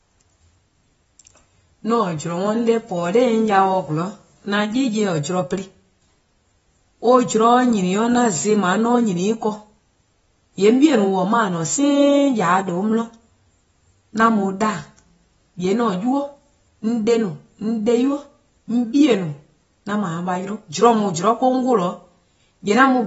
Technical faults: AAC compression

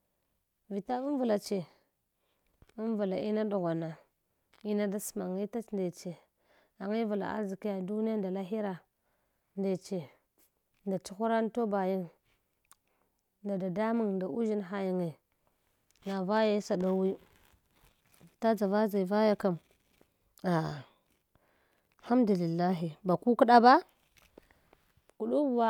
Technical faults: none

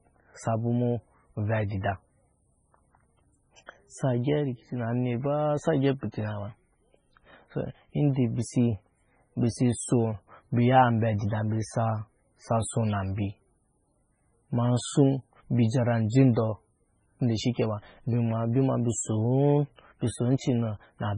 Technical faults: MP3 compression

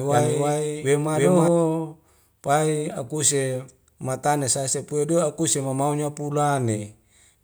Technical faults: doubled audio track

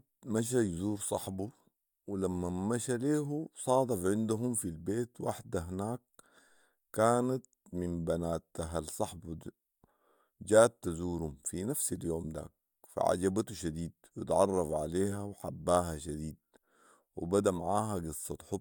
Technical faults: none

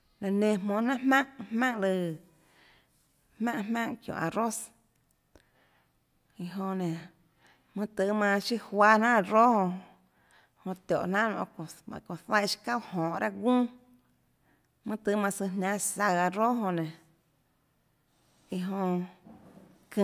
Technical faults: none

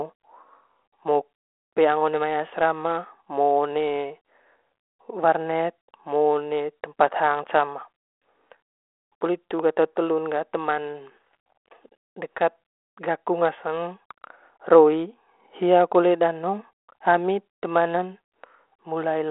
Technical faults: none

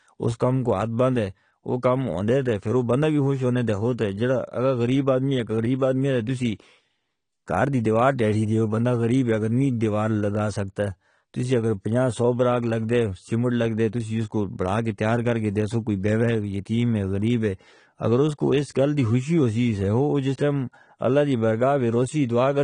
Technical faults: AAC compression

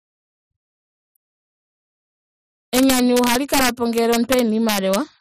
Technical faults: integer overflow

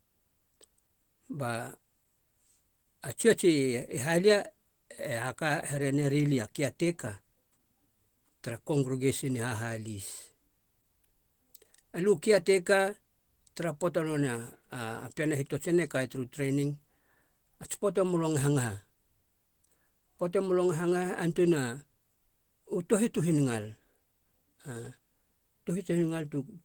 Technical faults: Opus compression

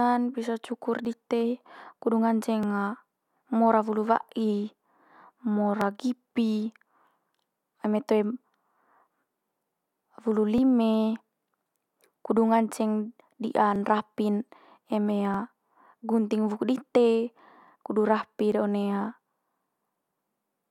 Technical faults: clock drift buffer slips

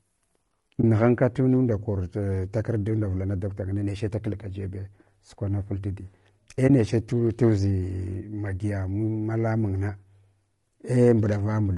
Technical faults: low-delay AAC compression; AAC frame loss with muting

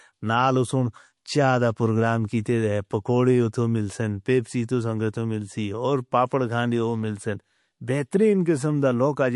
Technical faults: MP3 compression; pre-echo

